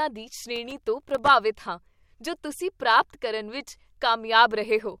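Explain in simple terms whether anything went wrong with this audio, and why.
From 0.56 to 1.30 s the speech is torn by processor overload crackle, just before "ਹਾਂ ਜੋ ਤੁਸੀਂ ਪ੍ਰਾਪਤ". Dozens of tiny silent gaps, each under a millisecond, pile up as dense grit, unlike a single dropout.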